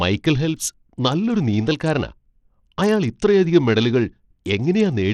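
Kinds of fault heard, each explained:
Bluetooth SBC compression: The speech throughout carries plainly audible codec damage of the kind left by the SBC Bluetooth codec, likely at a low bitrate around 80 kbps. SBC splits the signal into a handful of broad sub-bands and shares out bits with no model of hearing, so when bits are scarce the upper bands are starved first. Here the treble thins and flickers in and out, and a gritty, aliased noise rides on the voice.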